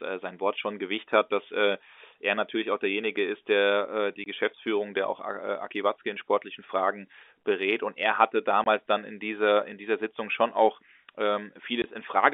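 Three brief holes cut into the speech, each a sudden 20 ms drop to dead silence: at 4.24 to 4.26 s just after "äh die", at 8.64 to 8.66 s between "er hatte" and "dann in dieser in", and at 11.82 to 11.84 s. This is packet loss filled with silence. Each gap's length fits a single lost 20 ms packet, and the receiver played nothing in its place. The hard cut in and out is heard against the narrow telephone band of the G.711 line.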